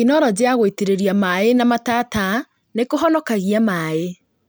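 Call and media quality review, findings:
No audible faults found.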